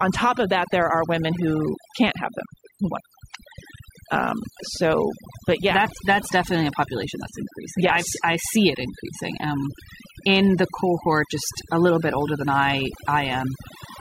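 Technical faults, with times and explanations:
Throughout: overdone noise removal. Noise reduction set too strong mutes frequency bands near the noise estimate, leaving twinkling specks in near-silence and taking quiet parts of the speech with them.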